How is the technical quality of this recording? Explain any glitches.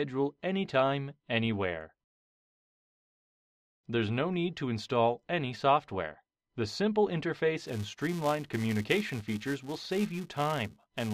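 The recording has one clear fault. From 7.63 s to the end at 11.14 s, the filter restarts on every block: its stored state is cleared at each block boundary, so each block starts from silence with a small transient. This produces a steady 345 Hz buzz that follows the sound's level, consistent with a 128-sample block.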